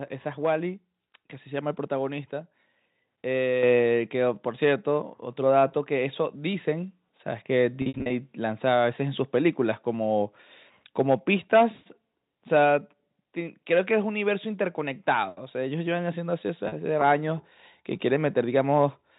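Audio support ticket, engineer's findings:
Mic input volume stepped up at 3.63 s: whole signal jumps about 6 dB in one step and stays there, room noise rising with it. Probable component: call software's mic gain control raising device input level. Distinguishing: an AGC or compressor would ramp smoothly and pump back, but this is a single clean step with voice and background locked together.

Packet loss with pitch repetition, 7.82–8.10 s: 180 ms missing, scattered across 280 ms, longest run 60 ms. Brief buzzy held tones, gaps fading to silence and returning via short cross-fade. Fits roughly 20 ms packets.

Same fault at 16.68–16.72 s: 40 ms lost, single short held buzz. Probable component: network path plus receiver concealment repeating the last pitch period. Distinguishing: no hard click or mute as with plain dropouts. Band limit at 4 kHz from G.711 mu-law is ordinary phone coding.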